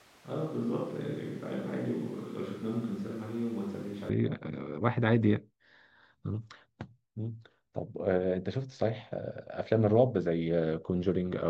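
Speech, where the close microphone's signal was likely missing and a distant microphone took over from the start until 4.09 s, leaving the voice hollow, roomy, thin, about 5 dB quieter and noisier.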